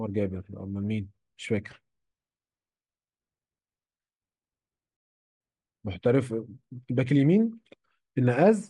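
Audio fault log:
4.97–5.41 s, rebuffering stall: the speech cuts abruptly to dead silence for roughly 0.44 s, then picks up again at precisely the point where it broke off, with no syllable missing or repeated. That clean pause-and-resume is the signature of a player that has drained its downloaded audio and must wait for more data before continuing. Nothing is dropped from the recording; instead about 436 ms of extra time is inserted into the playback.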